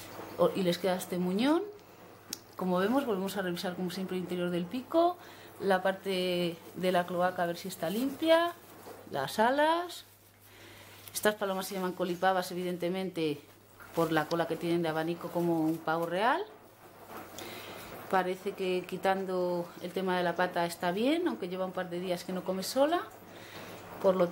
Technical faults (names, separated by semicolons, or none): none